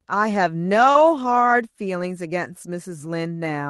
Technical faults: short concealed packet loss

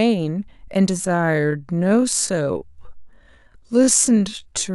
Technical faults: time-stretched section

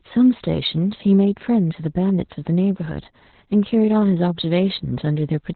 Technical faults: Opus voice compression

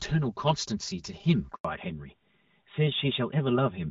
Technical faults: channel delay (comb filtering); handover gap; fallback to narrowband

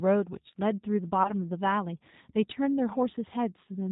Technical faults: G.729 codec; VoIP packet loss concealed by the speech codec

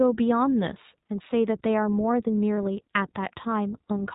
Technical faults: iLBC codec; lost iLBC frames

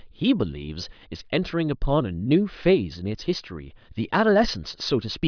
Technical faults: none

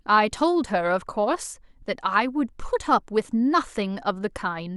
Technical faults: none

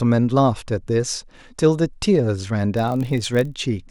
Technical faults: block size mismatch (padded)

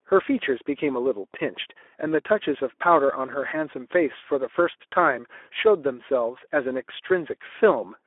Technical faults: Speex codec

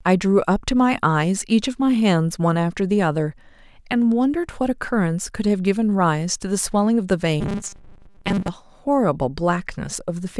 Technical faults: robotic sound from repeated short buffers

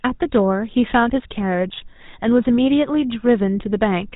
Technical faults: GSM full-rate codec

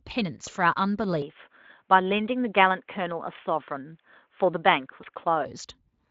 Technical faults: input switched to a poorer device; VoIP packet loss concealed by the speech codec

